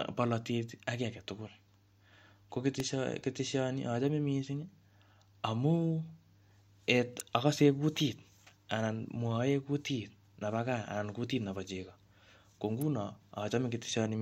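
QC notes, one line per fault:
2.80 s, electrical switching spike: a sharp snap peaking near -20 dBFS rides over the speech, likely an arc from a nearby switch or motor picked up on the line.
7.20 s, electrical switching spike: a louder snap, roughly -15 dBFS at peak, a brief burst of energy layered on the speech rather than replacing it.
12.82 s, electrical switching spike: a quieter tight click cluster around -25 dBFS, lasting under 10 ms, sitting on top of the speech.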